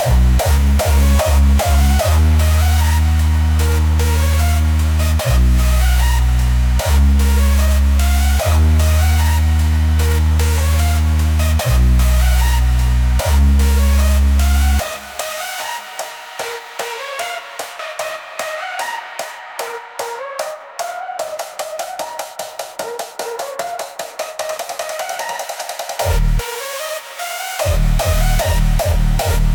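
Listening closely, nothing in the sound stood out as a technical fault.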